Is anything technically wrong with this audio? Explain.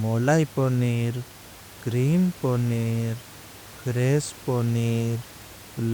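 No, nothing here is technically wrong; the only thing in the background is the ordinary noise of the room, sitting about 21 dB below the speech, which is just part of where it was recorded.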